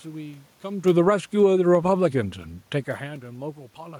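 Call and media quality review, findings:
Automatic gain rising, 1.3 to 1.88 s. Voice and room noise swell together by about 3 dB. AGC stage on capture side judged input too quiet, ramped its gain up over roughly 0.6 s. Background rises with voice, so not talker movement. Level shifts near 0.5 s and 3.0 s track voice only, consistent with the talker moving relative to the mic; room noise present throughout, part of the acoustic recording.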